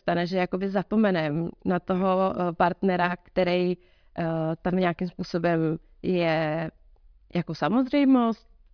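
Nothing in the recording stood out as a technical fault on listening.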